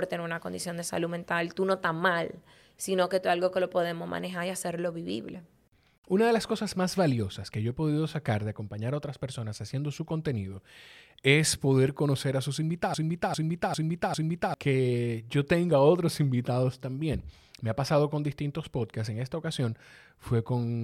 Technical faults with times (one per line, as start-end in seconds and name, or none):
12.94-14.54 broken-record loop